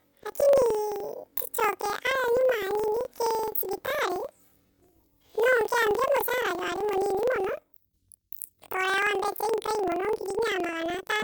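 From the first moment to the end, the speech has a planar-read-as-interleaved fault. Each block of roughly 43 ms, which fits a 2048-sample block, holds all the left samples followed by all the right ones, but it's being read as alternating pairs. Each block plays twice at double speed, left then right, so the pacing holds but the voice sits a full octave high, with a flutter at about 23.4 Hz.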